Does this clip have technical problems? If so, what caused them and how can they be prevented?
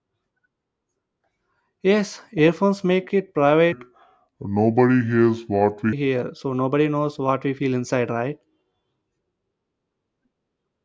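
Yes. From 3.72 to 5.93 s, just after "earphones make it" and up to "hear so nobody knows", the speech turns low and sluggish. This is a wrong sample rate fault. The samples are played back slower than they were captured, with no conversion. Speed drops to about 0.73 times normal, and pitch falls about 5.5 semitones. That fits 22 kHz audio played at 16 kHz. To prevent it, resample to the output rate or match the playback rate to the recording.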